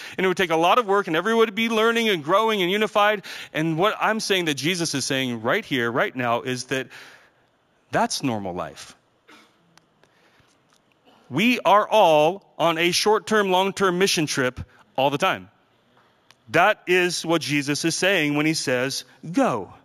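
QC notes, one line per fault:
Throughout, imaging from linear upsampling: the speech sounds like it was brought up from a 16 kHz original to 48 kHz by joining samples with straight lines, which filters poorly. Above 8 kHz there's a faint mirrored copy of the band up to 16 kHz, sitting roughly 25 dB under the real signal, and the top of the genuine band is a bit dulled. You catch it as a light metallic shimmer riding on the sibilants.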